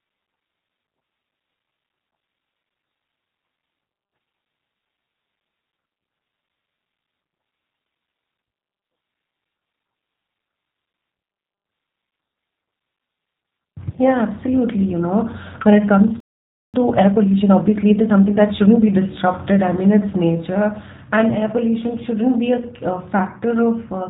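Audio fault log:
Throughout: G.729 codec. The speech is rebuilt from a vocal tract filter, pitch predictor and a few pulses per 10 ms frame at 8 kbit/s, so it sounds plainly rough and synthetic, with nothing above 4 kHz. Unlike simple band-limiting, the roughness is in the voice itself, not just dullness.
16.20–16.74 s: playback stall. The sound cuts off mid-flow and stays silent for about 0.54 s, then resumes where it stopped. The player likely ran out of data or was blocked. Unlike a dropout that loses audio, nothing is skipped.
16.74–18.88 s: time-compressed catch-up. Straight after the stall the speech runs at 1.25 times normal speed, pitch unchanged, as small pieces are cut and cross-faded to clear the backlog. The steady pitch distinguishes it from a sped-up resample.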